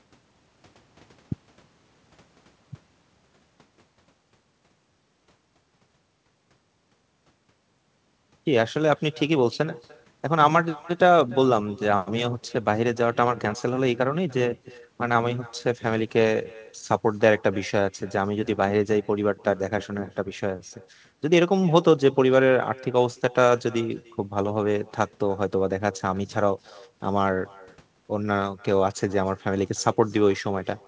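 All the way through, there's an echo with no canceller: the far end's loudspeaker feeds the mic and nothing strips it out, so every phrase returns roughly a third of a second later, about 25 dB down, faint and thin against the wideband G.722-style band that tops out at 8 kHz.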